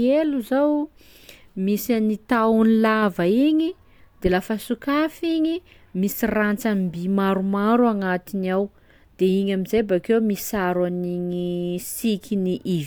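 Listening to this speech recording, nothing stood out as a technical fault at any point.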